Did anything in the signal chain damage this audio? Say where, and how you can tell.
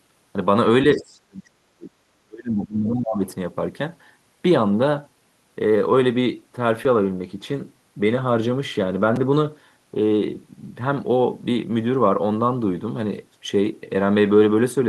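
Yes. Call processing at the talker's end likely let loudspeaker echo past the echo canceller. From 0.97 to 1.20 s a faint second voice, the other side's voice leaking through, sits about 25 dB below the talker. The device's microphone picked up its own loudspeaker playing the far end, and the residual the canceller failed to subtract carries on into the outgoing signal as a low-level voice underneath.

The same call processing stage then shows speech suppressed in double talk, from 0.97 to 3.21 s. With both sides active, the canceller likely could not separate the talker from the echo and clamped down on the whole signal. The talker's level drops, by as much as about 35 dB at its deepest, for roughly two seconds in total.

At the driver or buffer stage, two repeated buffer events occur, at 6.84 s and 9.16 s. Each time fresh audio arrived late, so the device replayed the last block twice more. 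The short repeats and hard joins sound like a brief buzzy click rather than an audible stutter, which fits a buffer of about 5 ms. Around 10 ms of real audio is lost at each point.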